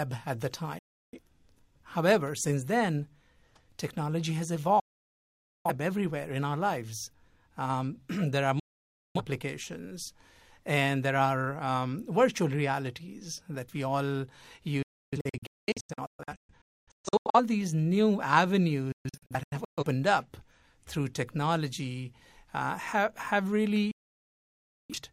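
Digital broadcast dropouts at 0.79–1.19, 4.80–5.71, 8.59–9.21 and 23.91–24.94 s: lost or corrupted frames mute the receiver, and the speech cuts to silence within 3 ms. At 14.82–17.40 and 18.92–19.84 s the muting breaks up into scattered short holes, none longer than 0.3 s.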